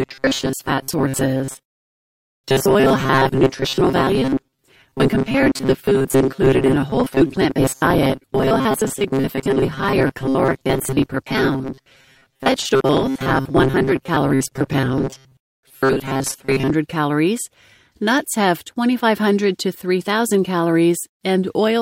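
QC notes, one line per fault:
0.01–16.74 s: robotic sound from repeated short buffers. The speech carries a rigid, metallic buzz fixed at 134 Hz. Likely cause: audio arriving too seldom, with the last 7.5 ms or so replayed to fill gaps, so about half is repeats.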